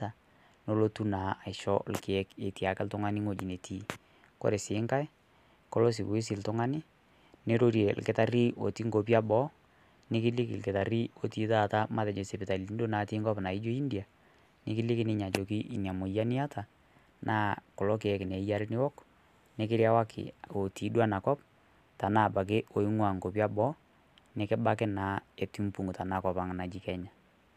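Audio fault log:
No faults were heard in this speech recording. Nothing in the audio calls for an entry in the log.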